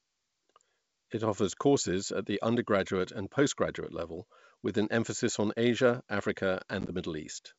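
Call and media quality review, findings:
Packet loss on ADPCM call, 6.81–6.92 s. About 40 ms of hard-edged silence scattered over 80 ms. Longest gap 10 ms, suggesting 10 ms packets. Decoder predictor and step size desync. Speech resumes with brief distortion.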